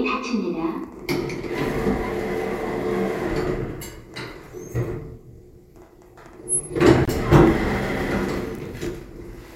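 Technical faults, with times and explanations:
7.05–7.08 s, Bluetooth dropout: a 23 ms silence, after which the sound resumes further on; likely a single wireless packet arrived late and was dropped.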